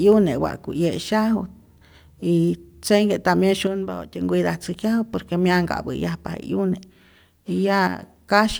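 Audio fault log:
3.67–4.21 s and 7.87–8.03 s: one channel drops out. The speech abruptly falls by about 6 dB and recovers just as sharply. The likely cause is one stereo channel briefly going silent, so the mono sum carries only half the shared signal.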